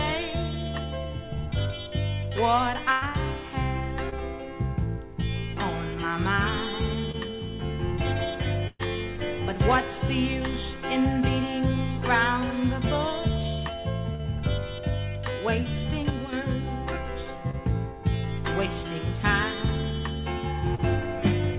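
Bursts of packet loss at 2.92 to 3.04 s and 8.67 to 8.81 s remove about 100 ms and 120 ms of the audio. In each gap the receiver keeps extending the last sound and lets it fade, so a voiced stretch turns into a held buzz and a noisy one into a dying hiss. The second burst ends in about 10 ms of silence before the stream picks up again further along.

Short concealed packet loss shows up at 4.10, 7.12, 14.15, 17.51 and 20.75 s, each time a 20 to 40 ms hole. The decoder bridges each hole by carrying the preceding sound forward, as pitched continuation or shaped noise, then crossfades back into the real signal. The result is a brief smear or wobble, and a quick transient inside a gap can vanish.

One channel drops out from 16.10 to 16.33 s. The level of what both sides share falls abruptly by about 6 dB. A lost stereo channel being summed to mono is the likely cause.

Throughout, the band stops at 4 kHz, consistent with the narrowband G.711 A-law codec carrying the call.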